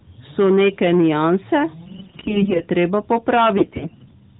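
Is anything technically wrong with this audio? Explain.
Yes. Hard clipping, present throughout: the signal overdrives a gain stage by about 9 dB, so a small share of peaks are sliced flat, adding harsh, fuzzy crackle on louder syllables. AMR bit errors, from 1.86 to 2.65 s just after "neke nianse" and again from 3.58 to 4.12 s: a weak link flipped a sizeable fraction of the less-protected bits in the mobile codec's frames, scattering the excitation pulses and skewing the gain and spectral details. The speech keeps its pitch and loudness but turns hoarse, scratchy and gargly, on top of the 4 kHz ceiling of the narrowband AMR-NB path.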